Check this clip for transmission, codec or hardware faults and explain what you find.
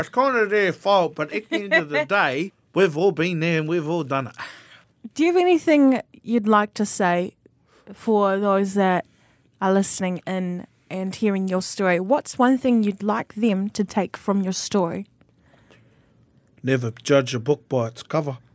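No transmission, codec or hardware faults are audible here.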